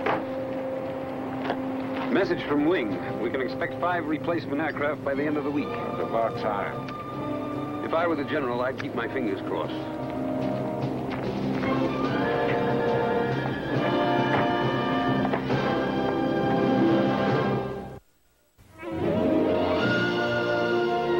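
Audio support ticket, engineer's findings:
No audible faults found on review; no action needed.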